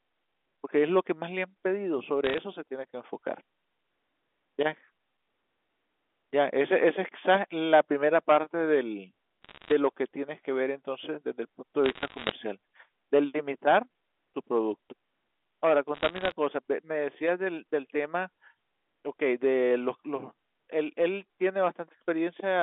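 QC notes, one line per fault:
2.24–2.38 s, 9.43–9.72 s, 11.86–12.32 s and 15.94–16.32 s: bit errors on a digital phone line. Bursts of sharp ticks and crackle sit over the otherwise unchanged A-law telephone band. About 0.7–1% of bits flip, and each flip corrupts one sample. Hits on sign or high-order bits give the loudest clicks.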